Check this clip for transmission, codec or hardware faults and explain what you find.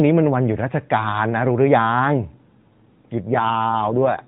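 One transmission fault stands out: an AMR rate drop from 3.28 s to the end of the clip. The speech comes through the narrowband AMR mobile codec, cut off at 4 kHz. At 3.28 s the network, probably responding to a weakening radio link, switches the codec to a lower mode and spends the freed bits on error protection. The audio points to a step down from about 12.2 to 5.9 kbps. The voice turns rougher, buzzier and more synthetic, with no gap and no change in bandwidth. On a spectrogram the 4 kHz ceiling stays put, but the harmonic striations after 3.28 s grow smeared and less distinct. The waveform continues without a break or level jump.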